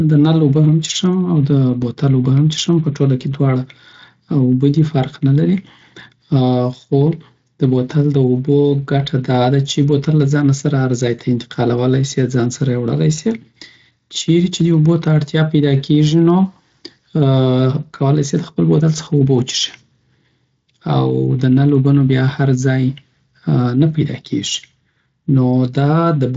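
No technical faults are audible.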